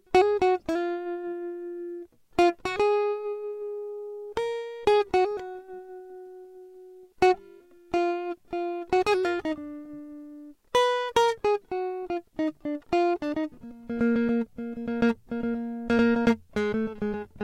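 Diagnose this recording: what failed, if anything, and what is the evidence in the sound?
Nothing failed: no stage in the chain leaves an audible defect anywhere in this music recording.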